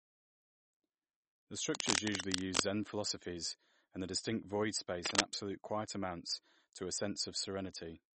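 Heavy encoding, most likely MP3 compression at a low bitrate (the damage fits something around 32 kbps), has starved the speech of bits for the whole clip. The encoder has cut the treble flat at 8.4 kHz, so nothing sounds above that, and weak frequency components drop in and out between frames. The result is a plainly audible watery, swirling texture, with s sounds turning metallic and consonant onsets smeared.

From 1.75 to 2.62 s, and again from 5.05 to 5.24 s, a worn cable or connector is the likely culprit: its contact resistance jumps around as it shifts, injecting dense, irregular bursts of noise. This cable scratch noise is heard as harsh rustling laid over the speech, about as loud as the speech in the first stretch and somewhat louder than it in the brief second one.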